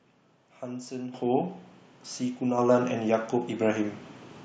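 At 1.14 s the level jumps by about 9 dB all at once, and at 2.58 s it jumps again by about 5 dB. Both are the microphone volume stepped up: the call software judged the input too quiet and raised the device's gain in one move instead of easing it up. Because the change happens before any processing, the speech and the background noise get louder together, with no fade.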